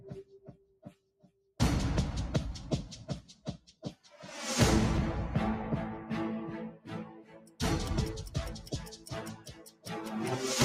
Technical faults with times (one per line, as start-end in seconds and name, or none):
0.00-10.65 noise suppressor applied to music or sounds
0.00-1.59 sound cut by the noise suppressor
3.28-4.09 sound cut by the noise suppressor
6.71-7.61 sound cut by the noise suppressor
8.52-9.91 sound cut by the noise suppressor